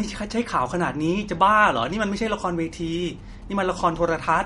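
Throughout, the speech sounds watery and swirly, with a hard ceiling at 11.1 kHz on a spectrogram, likely MP3 compression at a low bitrate, about 48 kbps. From 1.77 to 3.44 s, GSM signalling bursts from a nearby phone add a faint galloping buzz at 217 Hz, seen as short groups of vertical ticks.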